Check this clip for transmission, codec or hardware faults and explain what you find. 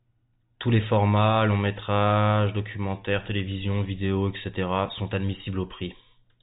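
No faults can be heard anywhere in the speech.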